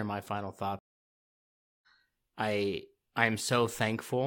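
At 0.79 s, after "my final", a stream reconnect breaks the connection. Silence follows for 1.04 s. At 1.86 s, the speech jumps roughly 0.7 s ahead, resuming with "I I".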